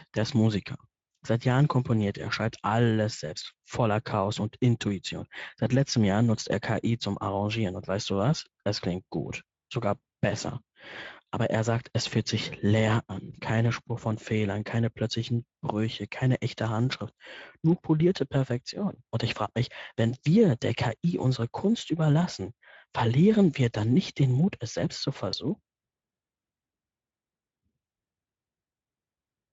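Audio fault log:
25.31 s, VoIP packet loss concealed by the speech codec: one 20 ms frame goes missing, so the decoder fills it by stretching the previous frame's pitch and filter at falling gain, giving a brief buzzy or noisy smear.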